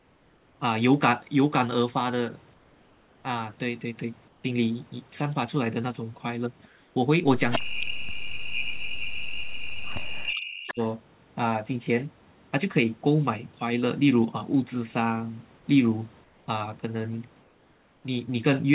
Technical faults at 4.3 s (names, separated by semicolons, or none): comfort noise in place of the background